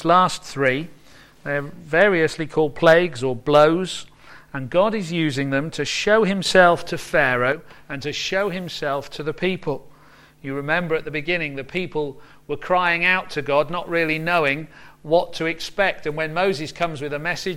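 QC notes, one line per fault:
6.46 to 7.52 s, sudden gain jump: The level leaps up by about 7 dB from one sample to the next, then drops back at the end. The background noise rises and falls with it. A gain setting was likely applied instantly, with no ramp.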